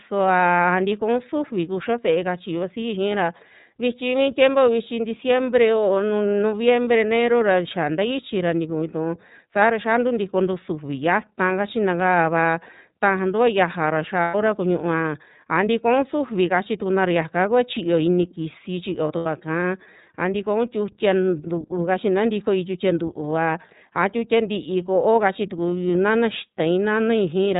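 Throughout the speech, the iLBC codec is plainly audible. Nothing above 4 kHz comes through, and the voice has a slightly rough, synthetic texture. The quality points to the 13.33 kbps mode, with each 30 ms block of excitation coded without reference to the previous one. This separates it from a simple telephone-band filter, which would narrow the sound but leave it smooth rather than grainy.

Lost iLBC frames interrupt the speech at 14.22 s for about 120 ms, and again at 19.17 s for about 90 ms, between "kisi chito" and "kaa a tikoun tiutia". The decoder fills each gap by repeating the last pitch cycle blended with noise, which sounds like a held, faintly buzzy vowel rather than silence or a click. Because each frame stands alone, the voice is clean again immediately afterwards, with no smeared recovery.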